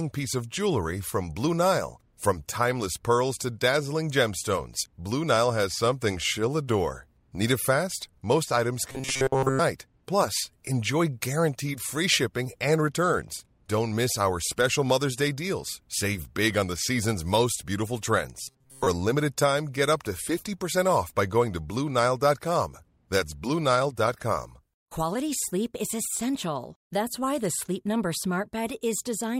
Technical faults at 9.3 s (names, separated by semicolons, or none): robotic sound from repeated short buffers